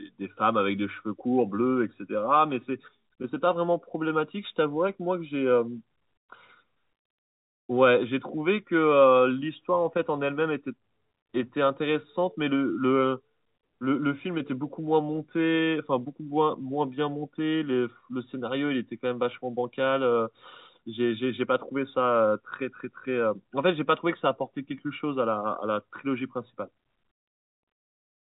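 No faults can be heard in the speech, which runs over an ordinary G.711 telephone coding path with the band ending at 3.8 kHz and only a faint quantisation noise sitting beneath the signal.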